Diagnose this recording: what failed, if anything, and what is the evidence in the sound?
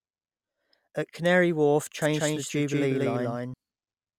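Doubled audio track from 2.02 to 3.54 s, likely a driver or buffer fault: an equally loud, undecayed copy lags about 200 ms, and the spectrogram shows abruptly bounded duplicate patterns.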